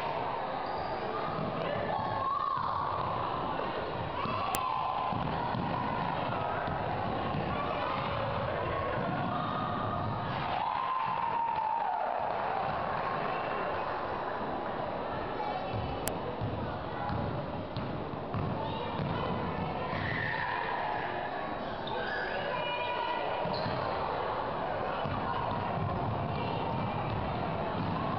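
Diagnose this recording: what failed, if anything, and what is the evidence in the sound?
File header played as audio, a storage and file-assembly fault: two sharp, loud clicks land at 4.55 s and 16.08 s, each about a millisecond long, unrelated to the surrounding sound. They mark joins where WAV pieces were concatenated with their headers left in, so a few dozen header bytes play as samples. On a waveform each is a short spike. On a spectrogram it is a thin vertical line spanning the whole frequency range.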